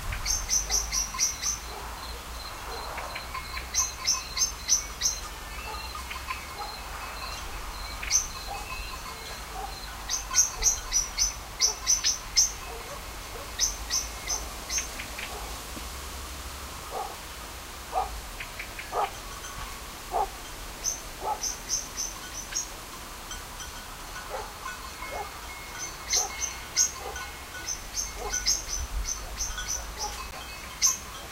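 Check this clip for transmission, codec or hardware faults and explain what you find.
One fault is present. At 30.31 s there is a block of digital silence: about 10 ms of audio drops to silence, likely because the output buffer was not filled in time. The abrupt cut and return, this short, is heard as a brief tick or dip.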